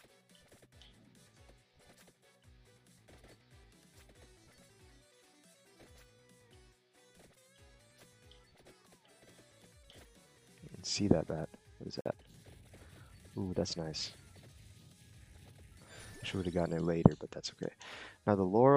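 At 12.01 s the sound drops to silence for about 48 ms and resumes at 12.06 s, picking up where it stopped. That's most likely a Bluetooth stall: interference delayed packets, the headphones' buffer ran empty, and playback waited for the resent data.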